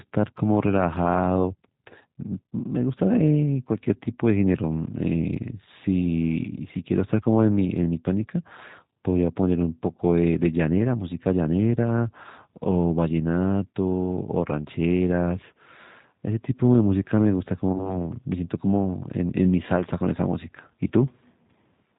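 From the start, the whole thing runs through the G.729 codec at 8 kbit/s, and you can plainly hear it. The coder rebuilds speech from a vocal tract filter, a pitch predictor and a handful of pulses per 10 ms frame, so everything above 4 kHz is gone. Sibilants sound dull, and the voice has that slightly rough, synthetic edge you get when the fine detail is modelled rather than carried.

Around 17.73 s there's VoIP packet loss concealed by the speech codec. About 20 ms of audio goes missing, which fits a single lost packet. The decoder fills the hole by carrying forward its last pitch and filter settings, so the sound smears into a stretched, buzzy tone or coloured noise that sags in level. Because each frame is predicted from the previous one, the damage doesn't snap back straight away. It stays weak and a bit distorted until about 17.97 s.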